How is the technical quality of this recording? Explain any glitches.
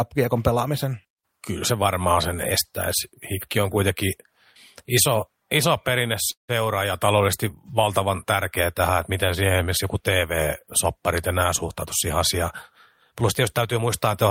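The speech has two glitches: a short freeze in the middle and a hurried stretch at the end.

At 6.31 to 6.51 s, after "iso iso", the last sound carries on briefly, then drops into about 130 ms of silence before "ja taloudellisesti valtavan tärkeä" resumes intact. This is a call audio freeze, likely from delayed packets emptying the jitter buffer.

From 13.11 to 14.24 s the speech sounds rushed at unchanged pitch, about 107% speed. This is a jitter buffer speed-up: the receiver trimmed pitch-period slices, about a tenth of a second in total, to shrink its backlog.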